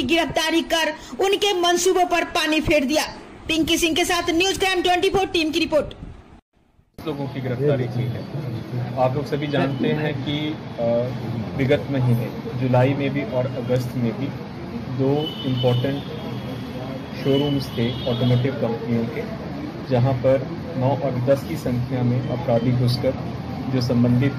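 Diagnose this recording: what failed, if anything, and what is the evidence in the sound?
Nothing in the signal points to a failure at any stage, from capture through to playback; level, continuity and timing all hold steady across the whole recording.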